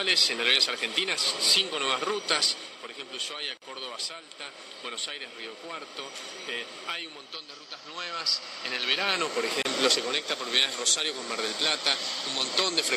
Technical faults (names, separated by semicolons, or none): gap at a join of encoded pieces